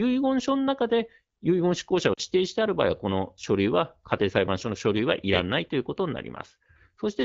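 At 2.13 to 2.22 s the speech briefly smears and thins, a short warble that sags in level before the voice returns slightly rough for a moment. These are lost AMR speech frames: radio errors corrupted about 40 ms of audio, which fits two 20 ms frames. The decoder filled the gap by repeating its last good pitch and vocal-tract settings at falling gain, and the fade is quick because the stream is AMR wideband (HD Voice) at 12.65 kbit/s.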